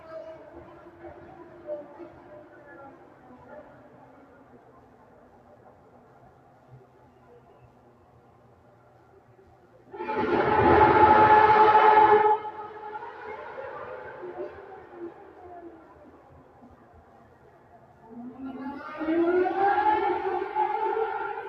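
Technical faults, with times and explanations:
Throughout: noise suppressor applied to sounds. A speech-oriented suppressor treats sustained tones, ambience and decay tails as noise, so attacks pass while held parts sink by about 20 dB, pumping and thinning. The waveform shows envelopes collapsing after onsets; the spectrogram shows tails carved away.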